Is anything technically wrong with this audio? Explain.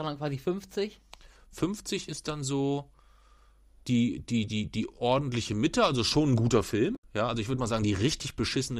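Yes. From 6.93 to 7.04 s, right after "also schon ein guter", there is damaged data in the compressed stream. The decoder misreads the corrupted frames, loses sync and hunts for the next valid frame header, producing a brief glitch lasting about 110 ms.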